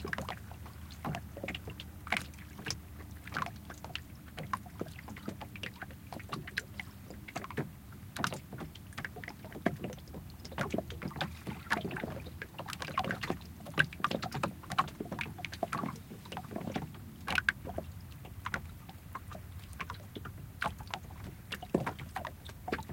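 No technical faults can be heard anywhere in this recording.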